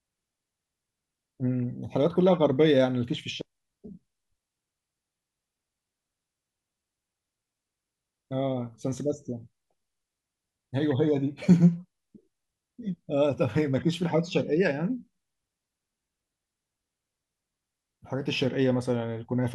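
No technical faults can be heard in this recording.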